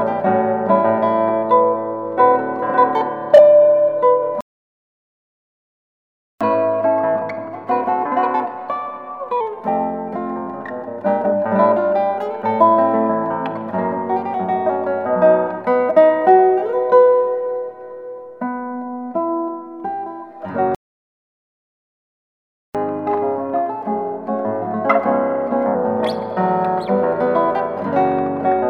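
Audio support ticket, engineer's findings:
Playback stall, 4.41 to 6.41 s and 20.75 to 22.75 s. Output drops to silence for 2 s each time, mid-flow. Likely buffer underrun or blocked player thread. Sound resumes only once the player recovers.

Catch-up at higher speed, 6.41 to 9.41 s and 22.75 to 25.75 s. Directly after each stall, audio runs at 1.1x, pitch up about a semitone and a half. Player resampling its backlog to recover lost time, then returning to normal rate.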